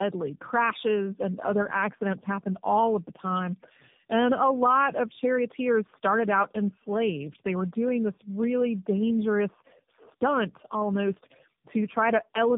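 Throughout, the speech sounds rough, muffled and warbly, with nothing above about 3.7 kHz. This is tandem speech coding: the sound fits three passes through narrowband AMR-type coders with G.711 links between, each coder re-encoding damage left by the previous one.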